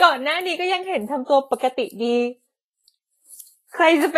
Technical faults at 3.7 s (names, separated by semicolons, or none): Vorbis compression